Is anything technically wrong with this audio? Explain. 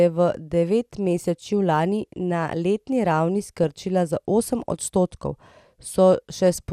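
Yes. DAB burbling runs from 3.49 to 3.69 s, between "lani na letni ravni" and "za osem odstotkov". Weak reception let bit errors, at a rate well under one percent, slip past error correction into the MP2 data, corrupting samples across about ten frames, so individual sub-bands pick up short blips of noise in the speech.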